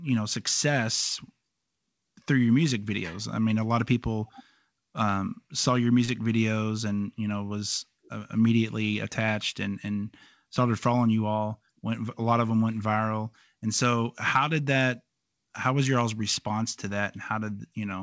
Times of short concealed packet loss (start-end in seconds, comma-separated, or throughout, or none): 6.05-6.11